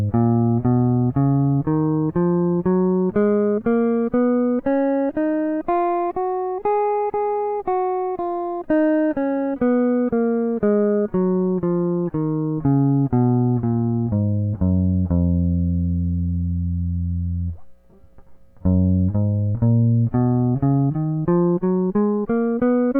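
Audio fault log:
20.62–23.0 s, time-stretched section: software likely squeezed the closing section into a shorter span, running it 1.52 times faster and dropping short slices to keep the original pitch, so the music abruptly rushes forward at unchanged pitch and sounds rushed.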